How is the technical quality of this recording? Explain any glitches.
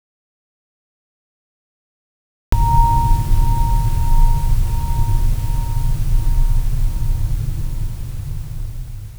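The recording has one clear fault: an audio dropout to silence at the very start. From 0 s to about 2.52 s there is nothing at all, with no room tone and no noise floor, and the music is already under way when it appears abruptly at 2.52 s. The likely cause is that the input signal was lost, through a disconnected source, a failed link or a mute, while the recorder kept writing silence. Whatever was playing during those first two and a half seconds is missing.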